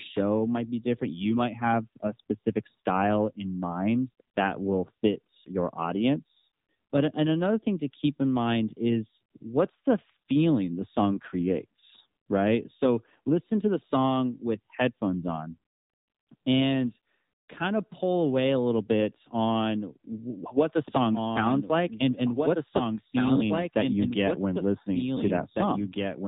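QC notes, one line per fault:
Throughout: AMR narrowband mobile codec. Nothing passes above 3.8 kHz, and the speech has a plainly buzzy, synthetic edge from pulse-driven vocal-tract modelling at a low rate, which fits a 7.4 kbps mode. That coded texture, not just lost treble, separates it from a simple low-pass filter.
20.88 s to end: doubled audio track. Just after "what the", a second full-band copy of the speech enters abruptly, about two seconds behind and about 5 dB quieter, likely from a slower capture path. It has no decay or room colour, so it is not reverb or acoustic echo.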